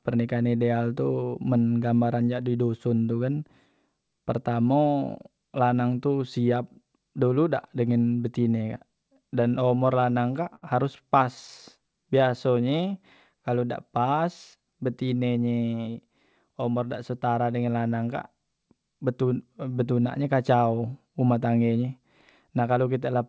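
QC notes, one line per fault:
9.66–10.64 s, repeated stalls (stutter), starting right after "dengan betine kak dan": packets kept reaching the receiver late, so its jitter buffer ran dry nine times in under a second. Each gap was bridged by stretching the last sound rather than by silence, the longest about 66 ms, around 140 ms in total and roughly 14% of the span. Nothing is lost, but the speech catches and judders, dragging briefly before it moves on.
11.79–12.98 s, jitter buffer slow-down, ending just before "kalu dak pas": the buffer was short of reserve, so the receiver padded it by repeating single pitch periods and slivers of pause over and over. That adds about 134 ms, so the passage plays at 89% speed with the pitch unchanged. Syllables sound drawn out and slightly sluggish, and the repeated cycles can give a faint warble.
15.15–16.08 s and 22.50–22.78 s, jitter buffer speed-up: here the buffer held more audio than its target, so the receiver trimmed short chunks of one or a few pitch periods repeatedly to cut the delay. 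Roughly a tenth of a second goes in the first stretch, which ends just before "umor dak setara dengan", and about 40 ms goes in the second. Both run at 111% speed with the pitch intact, so the delivery sounds hurried and clipped.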